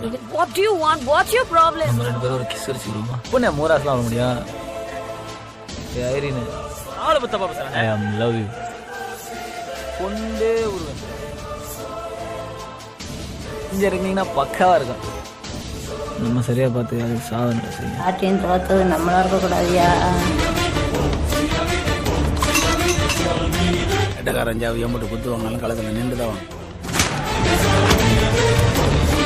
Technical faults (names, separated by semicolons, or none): none